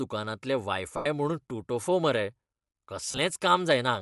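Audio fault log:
Throughout: Bluetooth LC3 compression, likely the cause of the grainy, breathy edge on the speech. The upper spectrum is thinned and noise-filled, consistent with a modest bitrate near 48 kbps.
0.97–1.06 s: lost LE Audio frames. About 90 ms is patched by reusing the last spectrum with random signs, fading it, so the speech smears into noise and dips.
3.06–3.18 s: lost LE Audio frames. About 83 ms of gaps are scattered over 120 ms, the longest run roughly 30 ms. Each gap is concealed with a noisy copy of the last spectrum that fits 7.5 ms frames.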